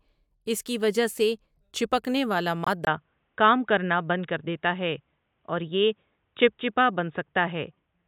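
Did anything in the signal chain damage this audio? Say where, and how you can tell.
Yes. At 2.64 s, just after "وجہ سے چپکنے والا", the sound drops into a hard-edged hole. It lasts 30 ms, which points to a single lost frame. This is a corrupt frame muted at the codec stage. The decoder rejected a damaged frame and the player substituted silence. Timing is kept.

From 2.85 s to the end, the audio turns dull and boxy. Nothing remains above 3.8 kHz. A 20 ms gap marks the change, and a faint new noise floor appears. Loudness stays about equal. This is likely an input switched to a poorer device at the capture stage.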